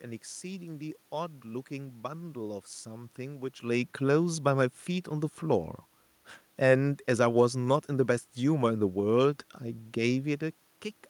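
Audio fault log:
No system faults can be heard in this speech recording. A background of room noise sits under the voice, and the level shifts as the talker moves relative to the microphone at around 3.5 s and again near 10.5 s.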